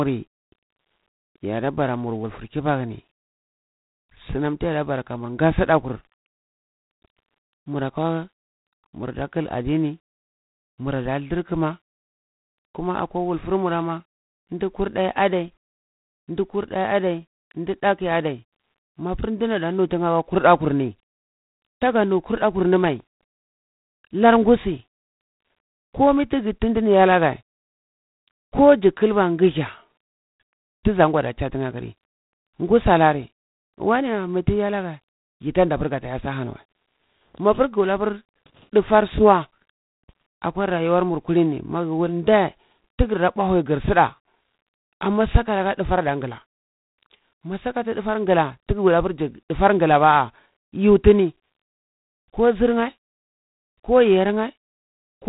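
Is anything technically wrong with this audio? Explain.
Yes. G.726 ADPCM damage runs throughout: with nothing above 3.8 kHz and coarse difference coding, the speech carries a rasping hiss that rises and falls with its level. That fits 24 kbit/s, and it sounds unlike the swirly artefacts of perceptual codecs.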